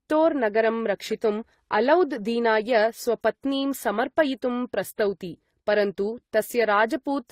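Throughout, the speech stops near 15.8 kHz and carries mixed, layered coding artefacts rather than one codec's single texture, likely from transcoding between lossy codecs.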